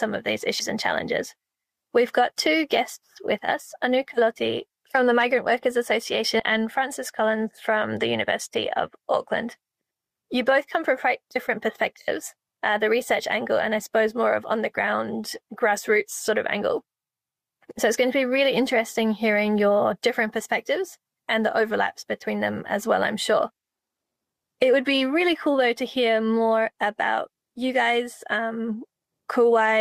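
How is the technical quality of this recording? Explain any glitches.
Two brief glitches stand out. Compressed frames skipped at 0.59–0.66 s and 6.39–6.42 s: whole coded blocks never reached the decoder's output, so the audio jumps ahead by roughly 70 ms and then 100 ms, which fits 20 ms frames.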